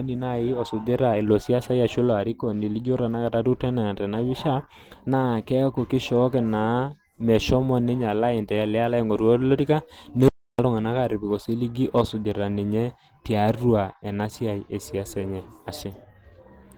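From the start and across the whole speech clip, the sound carries plainly audible Opus compression damage, likely from encoding at a low rate that fits about 16 kbps. The encoder appears to be running in its hybrid mode, which codes the lower band with its speech model and covers the upper band with coarse band-energy coding. The voice comes out muffled and hoarse, with a rough, grainy texture in place of clean detail. The upper band is present, with nothing above 20.2 kHz.

At 10.28 s the audio cuts out completely and returns at 10.59 s, an audio dropout to silence lasting about 0.3 s. The gap is silent with no room tone underneath, so the input stream stopped delivering signal while the recording carried on writing silence. The cause is likely a brief loss of the input connection or a momentary mute. Whatever was spoken during those 0.3 s is missing from the clip.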